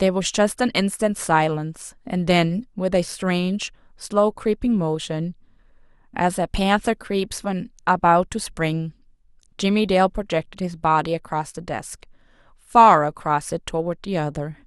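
From 0.10 s to 14.53 s the speech carries clock slip clicks: faint, evenly spaced ticks roughly every fifth of a second, some seventy in all, which are clearest on sustained, louder sounds and vanish in pauses. The likely cause is two devices running on unsynchronised clocks, drifting by around 100 parts per million, so that a single sample is dropped or repeated each time the offset builds to a full sample.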